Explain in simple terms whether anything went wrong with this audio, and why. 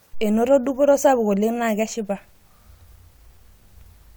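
Nothing went wrong here; the speech comes across steady and intact the whole way, with no glitches, dropouts or odd sounds to point to.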